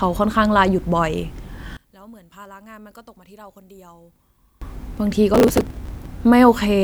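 From 1.77 to 4.62 s the speech suddenly collapses by about 27 dB into a faint trace of itself. The likely cause is one channel inverted: with one side's polarity reversed, everything common to both channels cancels when they are summed to mono.

Between 5.34 and 6.06 s a gritty burst of crackle tears across the speech, then stops. This is processor overload crackle: the processor kept missing its deadlines, skipping roughly a hundred tiny buffers, which fits buffers of about 1.5 ms, each leaving a hard-edged gap.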